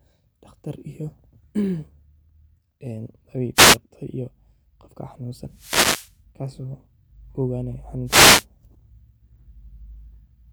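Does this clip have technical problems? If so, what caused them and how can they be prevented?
Yes. Wireless microphone noise hits swish in at 3.55–3.78 s, 5.50–6.17 s and 8.05–8.46 s as the FM radio link fades from cancelling reflections and receiver static swells over the speech; a digital dropout would go silent instead. Diversity receivers with line-of-sight antennas prevent this.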